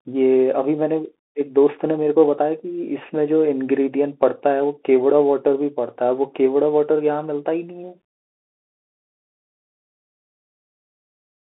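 A Bluetooth CVSD headset codec carries this speech clip from start to finish, a narrowband link whose sound fits 64 kbps CVSD, coding one up-or-down bit per sample with an adapting step size. The band runs roughly 250 Hz to 3.7 kHz, with nothing above 3.8 kHz, so the speech sounds thin and boxy. Where loud, bright sounds outpace the step, the coder audibly distorts; s sounds come out scratchy, and a granular hiss sits beneath the speech.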